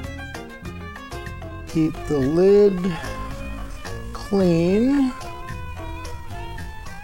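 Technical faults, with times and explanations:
1.41–7.04 s, time-stretched section: the sound abruptly slows to 0.56 times speed with pitch unchanged, likely software lengthening it by repeating short pieces.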